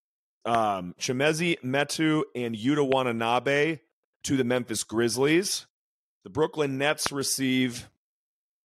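A loud pop lands at 0.55 to 0.57 s, 2.92 to 2.94 s and 7.06 to 7.08 s, each a single sharp thump about 15 dB above the speech, the last about 20 dB, likely from a voltage pulse such as static or a switch. The speech continues underneath, unlike a dropout.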